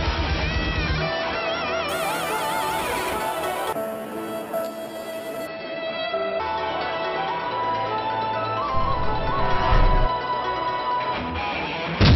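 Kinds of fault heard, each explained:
Imaging from sample-and-hold upsampling: repeated samples leave a metallic fizz about 15 dB down across 6 to 12 kHz, mirroring and tracking the sound, unlike hiss.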